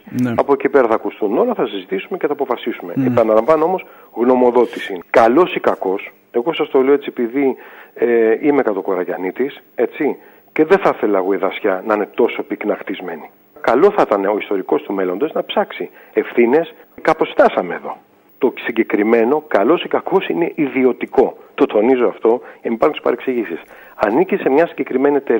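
From about 0.12 s all the way to 25.38 s there are clock slip clicks, faint ticks coming roughly every 70 ms so they blur into a soft rattle. That steady rate fits a single sample being dropped or repeated each time, likely two unsynced clocks drifting a few hundred ppm apart.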